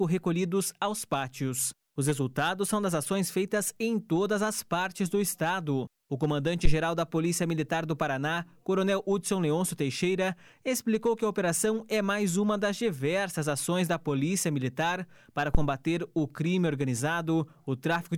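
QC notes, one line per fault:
6.65–6.74 s and 15.55–15.70 s, phantom power thump: two deep, low thuds, each peaking around -10 dBFS and dying away fast, in about 19 ms the first time and 34 ms the second. That's a supply being switched on a live input. The sudden DC step pushes through the coupling capacitors and comes out as a single low-frequency kick rather than a click.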